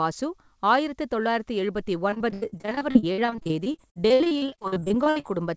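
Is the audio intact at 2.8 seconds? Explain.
No. Repeated packet loss (robotic sound) runs from 2.10 to 5.31 s, starting just after "ஆயிரத்து தொள்ளாயிரத்து எழுபத்தி". Packets keep going missing or arriving too late, and each hole is covered by stretching the last good sound before the next one hits. Dozens of short dropouts, the longest 81 ms, mean about a third of that stretch is patched-over sound, so speech at 2.8 s comes out choppy, with pieces missing.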